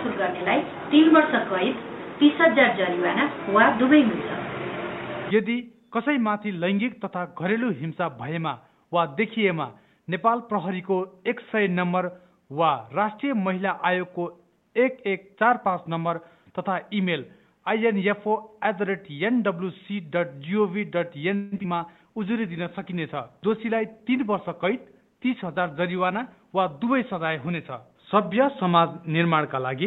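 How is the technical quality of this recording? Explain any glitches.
The recording has a cluster of call-transport faults starting around 21.4 s, followed by lasting quality loss through to the end.

At 21.35 to 21.54 s there is a call audio freeze. For about 0.16 s the last sound is stretched out as a fading buzz rather than cut to silence. This most likely happened because packets were delayed and the jitter buffer ran dry. The receiver kept extending what it had until data resumed, so playback picks up where it left off. Nothing is lost, but about 164 ms of delay is added.

Immediately after, at 21.58 to 21.61 s, comes a short concealed packet loss. About 20 ms of audio never reached the decoder, and the receiver patched the hole by extrapolating the preceding sound and blending back into real data. The result is a brief smear or wobble lasting only a couple of hundredths of a second. 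A short transient in that spot may be missing.

At 21.63 to 21.66 s the audio skips ahead. Roughly 70 ms of material is dropped and playback jumps straight to later audio that was already buffered, with almost no gap at the join. This also claws back some of the delay the freeze added, around 50 ms. It is heard as an abrupt discontinuity where a fragment of sound is simply absent.

From 21.83 s to the end there is a call bitrate drop. The encoder rate falls from 64 kbps to 19 kbps, staying at its lowest for about 5.5 s, and audio bandwidth narrows from 20 kHz to 8 kHz. A falling bandwidth estimate forced coarser coding, so everything after this point loses its top end and sounds duller and rougher, with a watery texture.

Overlapping that, from 23.48 to 25.45 s, is a jitter buffer speed-up. With more audio queued than its target, the buffer trimmed short pitch-period segments repeatedly, removing about a tenth of a second in total. 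Playback runs at about 105 % speed with pitch unchanged. It comes across as slightly hurried pacing over those two seconds rather than as any obvious click.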